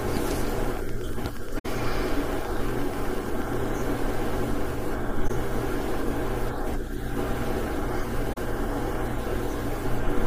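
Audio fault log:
0.03–3.67 s, train of clicks: Something is injecting a short pulse into the signal at a steady rate, most likely interference from nearby equipment or a faulty connection or power supply. About 30 near-identical clicks arrive regularly at 8.28 per second, peaking about 5 dB above the speech. They are heard as an even ticking laid over the talking, and they continue through the pauses.
1.58–1.66 s, 5.28–5.30 s, 8.33–8.38 s, AAC frame loss with muting: Compressed audio frames went missing, and the decoder replaced each one with silence. Because the codec's overlapping windows blend into and out of the gap, the single lost frame is a brief dip and each run is a soft-edged dropout. The gaps last 64 ms, 21.3 ms and 42.7 ms, which fits three, one and two lost frames of about 21 ms each.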